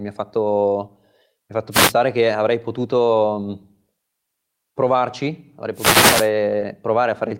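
A speech recording with two wireless microphone noise hits and one short concealed packet loss. The first noise hit runs from 1.71 to 1.93 s, right after "fatto mi ha fatto" and before "che avrei". The second, longer one runs from 5.74 to 6.30 s, following "provarci avrei". Each is a swish of static rising over the voice, which is what an analogue FM radio link produces when multipath reflections cancel the carrier and the receiver's own noise comes up. Hiss is layered on top and grows and fades with the depth of the fade. At 6.59 to 6.63 s there is a short concealed packet loss. About 20 ms of audio never arrived, and the decoder covered the gap by extending the preceding sound for about 20 ms before blending back into the real signal. It is heard as a tiny smear or wobble, not static. A plain edit or interface glitch would produce a hard click or a silent gap, while this one sounds smoothed over by the concealment.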